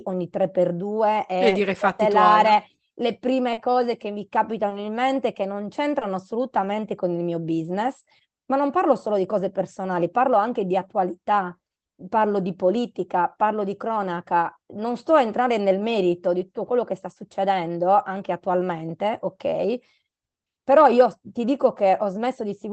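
Short concealed packet loss occurs four times in this speech: 1.49 to 1.53 s, 3.53 to 3.59 s, 4.69 to 4.73 s and 5.99 to 6.03 s. Each gap is 20 ms, except 40 ms at 3.53 s. Audio arrived too late for the decoder, which extended the preceding sound from its pitch or as shaped noise and then crossfaded back. Each one is heard as a brief smear or wobble, longest at 3.53 s, within audio capped near 8 kHz.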